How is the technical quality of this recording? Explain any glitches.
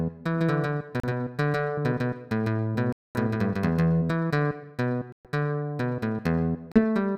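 The technical quality is compromised by two kinds of fault: a doubled track early on and repeated playback dropouts.

A doubled audio track runs from 0.34 to 4.10 s. A second full-band copy trails the original by roughly 150 ms at about equal loudness, likely from the sound being captured twice through a slower path. It gives a dry echo with no room decay, starting and stopping abruptly.

Bluetooth stalls cut the sound to silence at 1.00–1.04 s, 2.93–3.18 s, 5.12–5.29 s and 6.72–6.81 s, with gaps of 35, 225, 124 and 38 ms. They are likely caused by interference delaying packets until the headphone buffer emptied. Playback then resumes abruptly where it paused.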